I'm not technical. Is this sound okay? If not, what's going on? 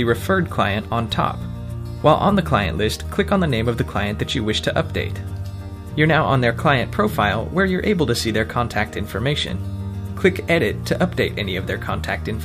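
Yes, no problems heard.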